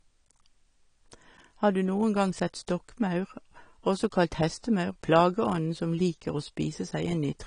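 Low-bitrate audio saved at a high bitrate affects this speech clip throughout: nothing sounds above 10.1 kHz, a ceiling likely left by an earlier low-bitrate encode that the later high-bitrate copy cannot restore.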